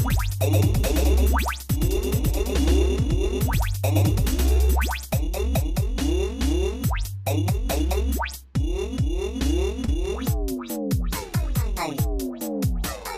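The audio has two faults. From the start until 5.12 s a doubled audio track is heard: the likely cause is the same signal reaching the mix twice, either captured again through a slower path or held as two out-of-step copies in an edit. The second, full-band copy trails by around a tenth of a second at roughly the same level as the original. This gives a flat, dry repeat with no decay or room colour, and it stops abruptly at 5.12 s. Later, from 9.85 to 9.90 s, there is a short concealed packet loss: about 20 ms of the stream never reached the decoder in time, so the receiver filled 22 ms by extending the preceding sound and then blending back into the real signal. The result is a brief smear or wobble at that point, and anything very short falling inside the gap may be lost.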